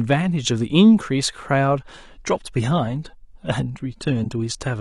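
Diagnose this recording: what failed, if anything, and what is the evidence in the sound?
The adaptive stream dropped to a lower bitrate, a network-stage fault. From 1.79 s to the end, codec artefacts rise in the speech, with no gap at the switch. The sudden change fits the player falling from about 96 to 32 kbit/s AAC.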